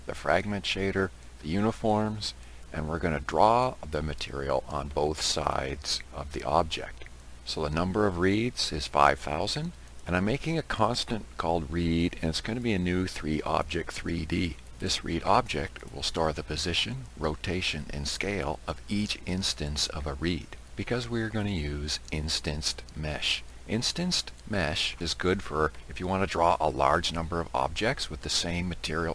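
Aliasing runs through the whole clip. Content above about 11 kHz was folded back down instead of being filtered out, which fits a drop from 48 kHz to a 22 kHz rate. The result is gritty, metallic high-end tones roughly 25 dB below the signal.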